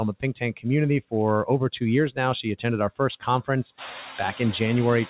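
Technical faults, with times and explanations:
Throughout: noise suppressor artifacts. The suppressor only pulls the steady background down by about 3 dB, so it's a gentle touch, but it's still working band by band, frame by frame. That leaves the residual noise breathing a little, dipping in the gaps and coming back up under the speech. It's more noticeable after the room noise jumps by about 19 dB around 4 s, where the noise sits about 15 dB under the speech.
0.40 to 0.66 s: speech cut by the noise suppressor. In this stretch the suppressor mistakes part of the speech for noise and ducks it along with the background, by as much as about 13 dB at its deepest. Only around a tenth of a second in total is actually hit, but that's enough for the affected sounds to come across swallowed and faint. The dull, band-limited top end, with nothing above 4 kHz, fits a G.711 mu-law call path.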